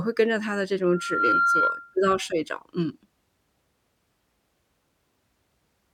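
From 0.82 s to 1.96 s, a loudspeaker feedback squeal rises over the speech. It is a single steady tone at 1.4 kHz. It swells up in under half a second and then sits a few decibels above the speech. The microphone is hearing the loudspeaker it drives. At 1.4 kHz the loop gain passes one, so that frequency keeps feeding itself. The howl holds for just over a second before it stops.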